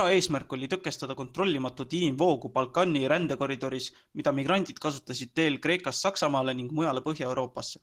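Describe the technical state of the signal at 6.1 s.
At 6.1 s the speech is still under Opus voice compression, which runs through the whole clip. A low-rate hybrid coder, consistent with about 16 kbps, models the voice with linear prediction and codes the top band coarsely, leaving the speech plainly hoarse, muffled and slightly robotic.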